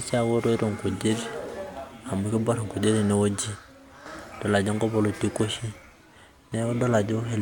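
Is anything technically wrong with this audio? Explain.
No, nothing technically wrong stood out on listening to this speech recording.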